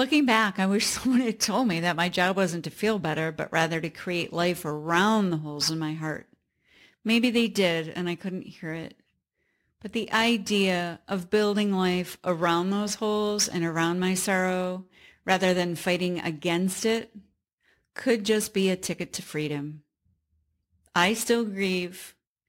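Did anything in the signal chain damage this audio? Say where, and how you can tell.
Yes. Crude rate conversion runs throughout the speech, from start to finish, at the sample-rate conversion stage. A gritty, inharmonic fizz sits around 25 dB below the speech and follows its loud, bright parts. Samples were dropped rather than filtered, which fits a 48 kHz to 44.1 kHz change.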